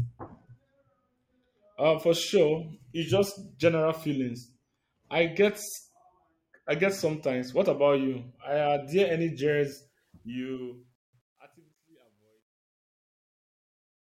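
A speech recording that fades out over the last few seconds, from around 9.7 s to the end at 14.0 s, and from 9.66 s the fade picks up truncation distortion. The gain stage is clearly dropping low bits without dither, which fits roughly 11-bit resolution, so the tail gets grainy, and from 11.12 s to 14.0 s it is at its worst.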